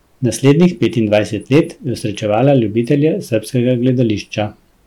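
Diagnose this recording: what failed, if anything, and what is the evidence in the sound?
Hard clipping throughout: the speech was driven about 7 dB past what the converter or its input gain stage could pass, flattening peaks. Under one percent of samples hit the ceiling, so loud syllables crackle. Waveform peaks look squared off; spectrograms show thin high-harmonic streaks there.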